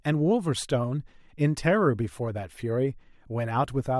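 Nothing stood out on listening to this short speech recording.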